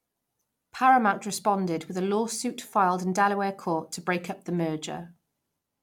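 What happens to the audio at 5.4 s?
Nothing goes wrong at 5.4 s; the speech carries on intact through that moment with no dropout, click or distortion.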